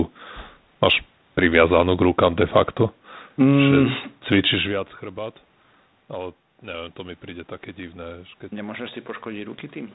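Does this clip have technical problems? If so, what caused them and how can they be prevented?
No, no technical faults here.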